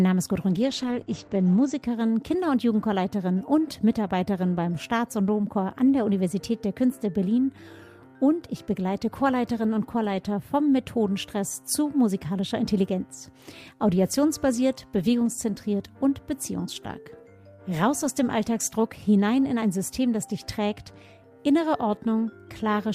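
From 0.49 to 1.87 s there is a call bitrate drop. The encoder was starved of bits for about 1.2 s. Detail above 8 kHz vanishes, and the sound turns rough and muffled. This fits a fall from around 48 to 11 kbps.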